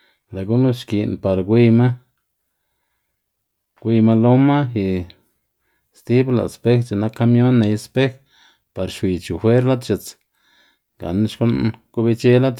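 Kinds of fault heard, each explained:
Nothing here jumps out as a technical fault; the speech just runs along without any glitches, dropouts or odd artefacts catching the ear.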